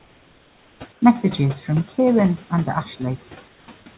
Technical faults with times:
0.00-3.98 channel delay (comb filtering)
0.00-3.98 noise suppressor artifacts
0.00-1.02 comfort noise in place of the background
3.48-3.68 comfort noise in place of the background

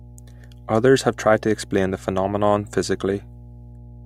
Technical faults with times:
0.00-4.05 mains hum

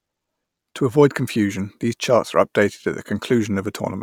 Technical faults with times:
none

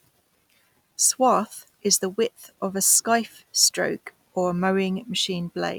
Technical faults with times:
1.03-1.30 hard clipping
1.93 hard clipping
2.86-3.15 hard clipping
3.63-3.67 hard clipping

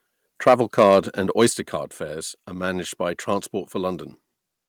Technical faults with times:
0.46-0.99 microphone overload
0.49 microphone volume stepped down
1.40-1.46 microphone overload
1.50 microphone volume stepped down

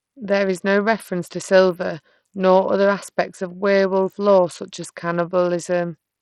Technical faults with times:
0.00-6.21 Bluetooth SBC compression

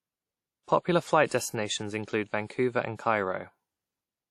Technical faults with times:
0.00-4.30 WMA compression
1.28-1.31 pre-echo

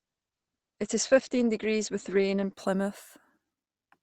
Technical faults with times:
0.00-2.53 adaptive stream starting at a low bitrate

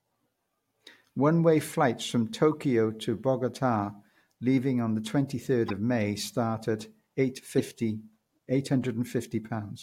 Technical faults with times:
2.52-2.54 corrupt frame decoded
5.68-5.71 corrupt frame decoded
7.58-7.60 corrupt frame decoded

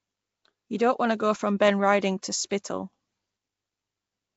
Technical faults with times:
0.00-4.36 Nellymoser compression

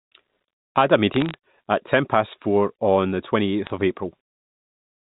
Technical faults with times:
1.14-1.34 bit errors on a digital phone line
3.67-3.70 bit errors on a digital phone line

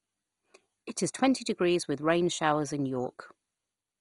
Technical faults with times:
0.00-4.01 MP2 compression

